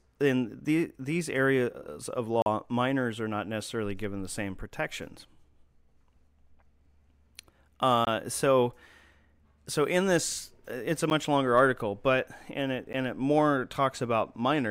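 Speech with four blocks of digital silence, where the audio cuts out abruptly: 2.42 to 2.46 s (40 ms, between "the these areas of" and "minors are not necessarily"), 8.05 to 8.07 s (20 ms), 11.1 s and 12.93 s (10 ms each), likely from output-buffer underruns.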